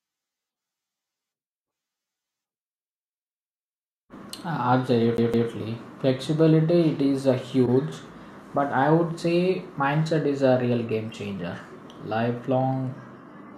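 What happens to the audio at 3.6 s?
Nothing goes wrong at 3.6 s; the speech carries on intact through that moment, with no dropout, click, distortion or other fault to be heard.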